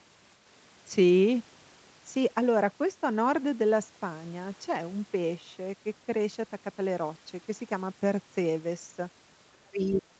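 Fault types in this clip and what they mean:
Speech suppressed in double talk: From 9.5 s to the end of the clip, the speech drops sharply, by around 35 dB at its deepest. The likely cause is an echo canceller that heard both sides at once. It mistook this talker for loudspeaker echo and turned the speech down.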